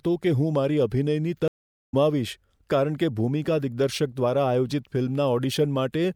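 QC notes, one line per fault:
1.48–1.94 s, stream reconnect: the connection dropped just after "કે હું મારી અભિનયની". The player fell silent and restarted its decoder mid-stream, so the speech breaks into 0.45 s of silence, then resumes roughly a third of a second further along, skipping ahead.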